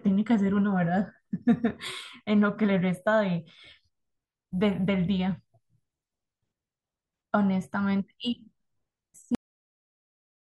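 Cut-off end at 9.35 s: the speech stops abruptly mid-sound and the remaining 1.1 seconds, up to 10.45 s, are pure digital silence. The final stretch of audio was never written out or played back, so whatever was being said is truncated rather than finishing naturally. There is no decay, fade or room tail. The signal simply drops from active speech straight to silence.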